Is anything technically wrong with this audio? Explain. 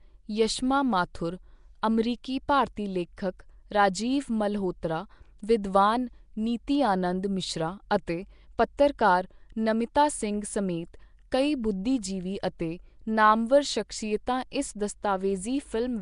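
Yes. Two faults are audible in this speech clip.

The first runs throughout. The speech has a rough, hissy halo and a smeared, underwater quality. Nothing sounds above 10.6 kHz. The damage is plainly audible. This is likely Nellymoser compression, the old Flash microphone codec, at a rate that fits about 44 kbps. It codes short fixed blocks with very few bits. Weak bands get nothing and are filled with noise, which causes the hiss and the smearing.

The second is a pre-echo at 8.58 s. A short hiss of about 11 ms comes just before a sharp attack, and the attack sounds soft. The codec spreads its quantisation noise across a whole block. The attack falls late in that block. The noise meant for the loud part therefore also fills the quiet moment before it.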